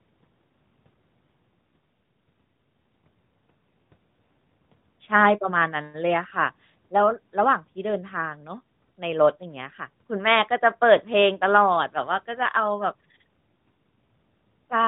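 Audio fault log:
No faults to enter in the audio fault log for this speech clip.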